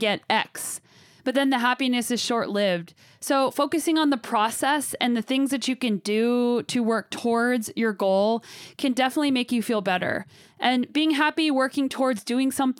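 At 3.82 s the speech has a repeated buffer: fresh audio arrived late, so a tiny block, fitting a 64-sample buffer of 1.33 ms, played three times. Unlike a dropout's silent gap, the repeats produce a brief click-like buzz near 750 Hz, and a few milliseconds of audio are skipped.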